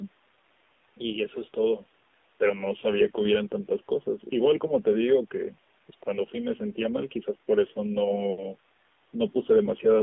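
Throughout the clip, the speech carries AMR narrowband mobile codec damage. The line passes only about 250 Hz to 3.6 kHz. Because the speech is rebuilt from a vocal-tract model driven by sparse pulses, it sounds plainly buzzy and synthetic, which fits a low mode near 7.4 kbps.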